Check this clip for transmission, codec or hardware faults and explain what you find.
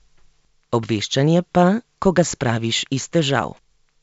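Nothing to flag: the speech comes over a G.722 wideband telephone link at 64 kbit/s, reaching up to about 7 kHz with at most a faint trace of the coder's upper-band hiss.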